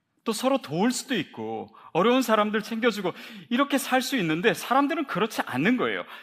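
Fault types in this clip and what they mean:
No faults turn up anywhere in this speech clip, so there's nothing to list here.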